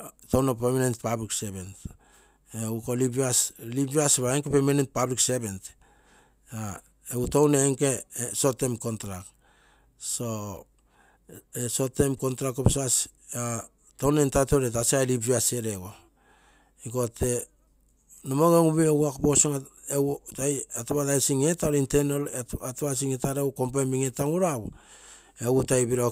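A block of digital silence at 20.73 s cuts the speech out for about 5 ms, which fits a 256-sample buffer left empty. With no fade in or out, the abrupt edges merge into a tick or dip rather than an audible hole.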